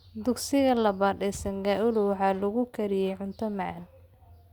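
At 1.34 to 1.37 s, a worn or dirty contact in the signal path briefly makes and breaks as it shifts, producing loose connector crackle. The speech is chopped into fragments for those few hundredths of a second, heard as a short, irregular burst of scratchy crackle.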